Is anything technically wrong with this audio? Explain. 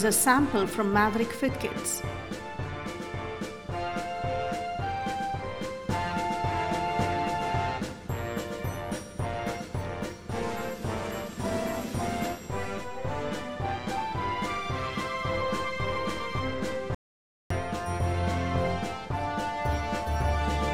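Yes. From 16.95 to 17.50 s the sound cuts off mid-flow into silence, with no room tone, for about 0.56 s before resuming abruptly. This is an audio dropout to silence, most likely from the input briefly disconnecting or muting while recording continued writing silence.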